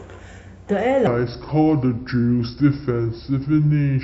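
From 1.07 s to the end, the speech is a section at the wrong speed: it plays at 0.725 times its recorded rate, so everything drops about five semitones and drags, with syllables stretched and the voice turned deep. The likely cause is playback or editing against a mismatched clock. On a spectrogram, harmonics and formants shift downward at 1.07 s and spread wider apart in time. The waveform's cycles and word envelopes lengthen accordingly.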